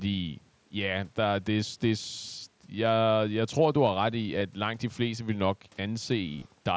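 At 4.39 s, between "du har ret i" and "langt de fleste vil", and again from 6.34 to 6.45 s, concealed Bluetooth headset packet loss occurs. The receiver patched each gap by repeating recent waveform. The first is a brief gap of about 15 ms. The second, about 68 ms lost in short bursts, is spread over about 0.1 s.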